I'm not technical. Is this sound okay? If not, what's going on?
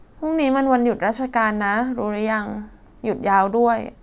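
Yes, the recording's signal is technically sound, with nothing wrong to point to anywhere in it.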